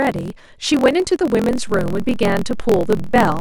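A block size mismatch with truncation runs through the whole clip. One stage writes blocks longer than the next stage reads, so the tail of every block is dropped before it reaches the output. The speech carries a steady 43.1 Hz buzz, which fits blocks read 1024 samples at a time. Because part of every block is lost, the talking runs 1.12 times faster than it should, while the pitch stays close to normal.

A DC step arrives at 1.51 s. The waveform's zero line jumps to a new level at that moment, the kind of shift a converter recalibrating or an offset input being switched in would cause. The offset holds from there to the end of the clip rather than returning or fading. The step itself is heard as a low thump or click, and the speech continues across it unchanged.

Damaged data in a compressed stream shows up at 2.98 s. A short stretch of the encoded stream is corrupt, through lost, zeroed or overwritten bytes, so the decoder misreads or rejects the frames there. 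It loses sync and has to hunt for the next valid frame header before decoding can resume. The result is a brief chirp, squawk, click or short hole lasting only a fraction of a second.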